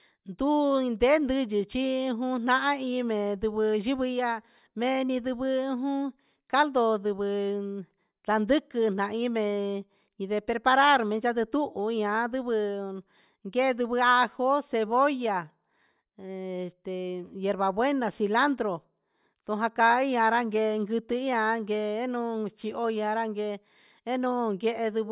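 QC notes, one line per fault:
No faults found. Nothing in this speech recording calls for a note.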